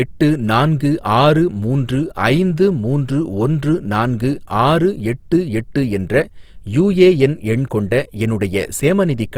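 From start to finish the speech carries a rough, grainy texture, with the voice sounding plainly noisy rather than clean. This points to Opus compression, likely in its music mode at a low rate that fits around 24 kbps: the encoder keeps each band's energy but fills starved bands with noise or folded content. The band still reaches about 20.4 kHz, and there is less swirling than with MP3, mainly this steady graininess.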